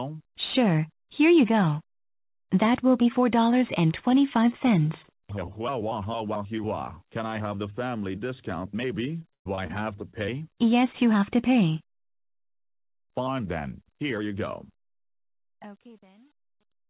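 Between 9.22 and 9.71 s the audio turns choppy, with pieces missing. This is repeated packet loss: four gaps fall within that half-second, the longest about 118 ms, and each was patched by stretching out the preceding sound, so roughly a third of the stretch is concealment rather than real signal. Shortly afterwards, at 10.11 s, there is a brief smear lasting about 20 ms, a short concealed packet loss in which one more small piece of audio arrived too late and the receiver bridged it by continuing the last sound before blending back into the real signal. The whole clip carries the narrow, telephone-like band of a call path with nothing above 4 kHz, consistent with G.711 A-law.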